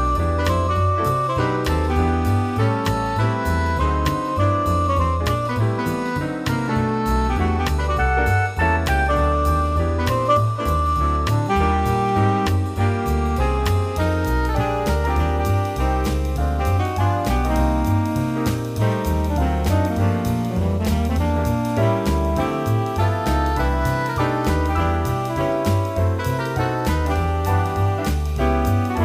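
No technical faults can be heard anywhere in the recording; the signal stays steady and intact throughout.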